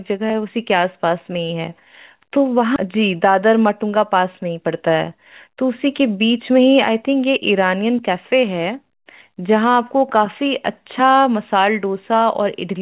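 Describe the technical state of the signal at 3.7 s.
At 3.7 s the speech is inside a jitter buffer speed-up running from 2.85 to 6.58 s. After a backlog of delayed packets, the receiver repeatedly cut pitch-period-length slices, about 300 ms in total, so playback runs 108% fast at unchanged pitch and sounds hurried. A spectrogram shows harmonics at normal spacing but syllables time-compressed, with nothing above 4 kHz from the call path.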